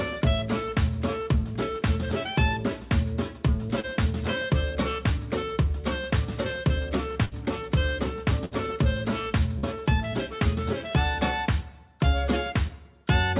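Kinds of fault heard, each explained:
Short concealed packet loss: a brief hole of about 30 ms, filled by extending the preceding sound and blending back, heard as a quick smear near 3.8 and 9.6 s.
Burst of packet loss: around 60 ms of audio lost at 7.25 and 8.45 s, bridged by a fading continuation of the prior sound before playback resumes further on.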